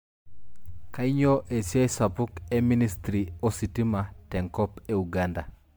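Throughout the speech, the sound is swirly and hollow, with smeared consonant attacks and nothing above 19.9 kHz. That top limit fits MP3 at 128 kbit/s, yet one pass at that rate would sound far cleaner. The likely cause is generation loss: the audio decoded and re-encoded around seven times, each pass quantising on a shifted frame grid so that noise and spectral holes pile up. A single low-bitrate encode would show a lower cutoff, not this accumulated smear.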